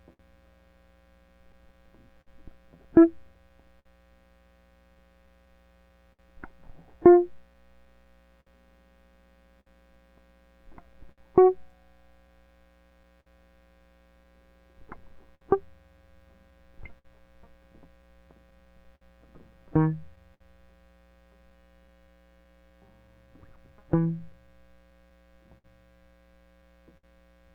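Throughout the music the tempo feels faintly unsteady, with small hiccups recurring at uneven intervals. This is clock drift between sender and receiver. The sender's clock runs roughly five percent slow, so the receiver's jitter buffer keeps draining and has to compensate.

From 0.13 to 3.88 s, scattered short gaps appear as about five brief ticks or smears, the longest around 50 ms. Packets arrived late or were lost, and the receiver covered each hole by extending the preceding sound, so nothing audible is actually missing.

Repeated timing corrections run from 1.29 to 26.63 s. They are heard as slight stumbles and a tempo that sags to about 98 percent of normal. To stay in step with the slower sender, the receiver keeps repeating short pieces, adding about half a second overall.

From 6.13 to 6.22 s, a sound hangs on too long with a faint buzz or dip. This short stall from a late packet happened when the buffer ran empty and the receiver stretched the last sound by about 60 ms until the packet arrived, then went on from the same place.

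Scattered short gaps return at 8.40 to 11.21 s (around five), 13.20 to 20.43 s (around ten) and 23.56 to 27.06 s (around five). Each is a tick or smear up to about 70 ms, filled by continuing the previous sound after a lost or late packet.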